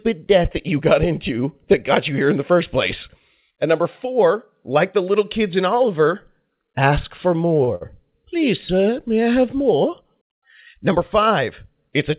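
Short stalls from late packets at 7.64 s and 7.75 s: twice the jitter buffer ran dry waiting for a packet, so the receiver stretched the last sound, by 32 ms then 57 ms, before resuming exactly where it stopped. Each is heard as a briefly held sound with a slight buzz or dip within this narrowband call audio, which has nothing above 4 kHz.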